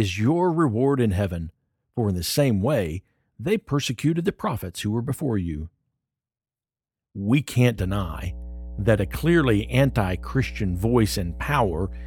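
At 7.78 s a mains hum comes in and runs to the end of the speech. It is a steady, pitched 60 Hz drone with a few low harmonics, fairly loud and not far below the talker, which points to a ground loop or a nearby transformer coupling the power line into the signal. Unlike rumble or handling noise, it holds one fixed pitch and level and doesn't change with the speech.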